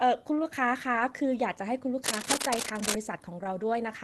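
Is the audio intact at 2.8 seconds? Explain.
No. Cable scratch noise runs from 2.04 to 2.95 s: dense, uneven scratching about as loud as the speech, likely from a worn connector's contact resistance fluctuating.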